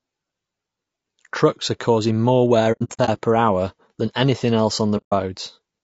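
Across the whole clip the speech sounds rough and grainy, with a hiss filling the gaps between harmonics and a thin, synthetic top band. This is likely low-delay AAC compression, and the damage fits a bitrate around 32 kbps. Its short frames cannot resolve pitch harmonics finely, so the grain stays steady throughout rather than arriving in bursts.

From 2.72 to 3.10 s, between "causing more wear" and "per hour than anything", AAC frame loss with muting breaks the sound into soft-edged holes. About 240 ms is lost, spread over roughly 360 ms, and the longest gap lasts around a tenth of a second. The overlapping decoder windows fade the sound out and back in, so the edges are smooth, unlike the hard cut of a raw dropout. A second 150 ms muted gap follows at 4.97 to 5.13 s, just after "hour than anything else".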